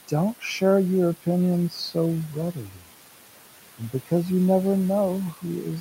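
A speech recording carries noise suppressor artifacts throughout: the suppressor pulls the room noise down by about 12 dB, so the background sinks between phrases and rises under the voice. On a spectrogram this shows as patchy, blotchy noise bands. Between 2.73 and 2.84 s there is speech cut by the noise suppressor, which mistakes a soft stretch for noise and lowers it by up to about 8 dB for roughly a tenth of a second. The waveform shows a brief dip there, and the spectrogram shows a faint gap. The room noise itself, sitting about 17 dB below the speech, belongs to the recording.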